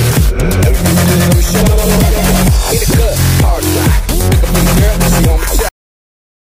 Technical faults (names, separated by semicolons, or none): cut-off end